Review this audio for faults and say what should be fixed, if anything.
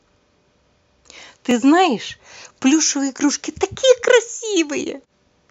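A brief click or stutter interrupts the speech at 1.51 s and again at 3.53 s. These are overlapping chunks: the audio was handled in 2.0 s blocks, each starting about 13 ms before the previous one ended, so that sliver plays twice at every join. To prevent it, align chunk boundaries exactly, or trim or crossfade the shared region when reassembling the blocks.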